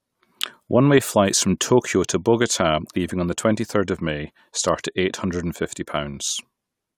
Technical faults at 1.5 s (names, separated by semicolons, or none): none